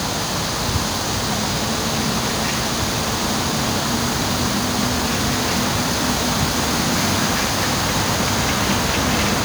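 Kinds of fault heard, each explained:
Sample clock jitter: the converter's clock wavers by roughly 10 microseconds. Hiss sits about 15 dB below the sound, rising on loud, bright moments.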